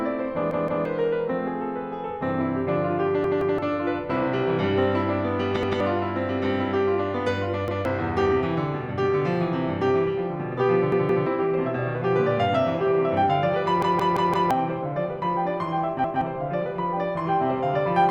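Music, where playback repeatedly ran short of data and the device replayed its last buffer: a repeated buffer fault at 0.51, 3.24, 5.63, 7.68, 10.92, 13.82 and 16.04 s. Each time a 0.17 s slice (which fits an 8192-sample buffer) stutters with hard joins, replayed once or twice, and four times at 13.82 s, so the music skips roughly 0.15 to 0.7 s.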